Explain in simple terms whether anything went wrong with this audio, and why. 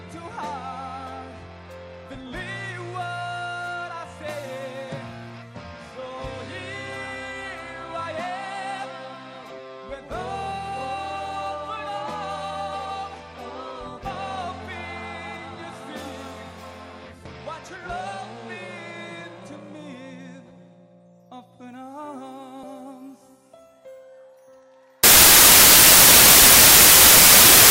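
From 25.04 s to the end at 27.70 s, the audio turns into loud, harsh noise. This is samples built from the wrong bytes. Unlike ordinary hiss, it comes from the sound's own values being pieced together wrongly.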